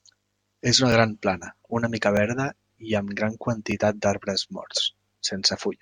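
Three times the playback device missed its deadline for new audio and played its last buffer once more, a repeated buffer fault: at 0.92 s before "gran plana una mica", at 2.17 s before "verda i amb gran", and at 3.72 s after it. Each repeat lasts about 5 ms, which fits a 5 ms buffer, so it comes through as a brief click rather than a stutter, with almost no speech lost.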